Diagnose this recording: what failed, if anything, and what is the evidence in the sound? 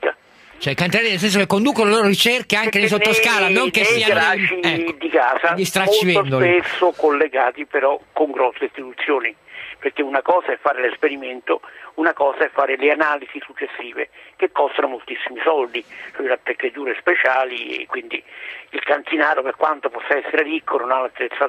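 Nothing failed: no stage from capture through playback leaves any audible evidence of trouble anywhere in the recording.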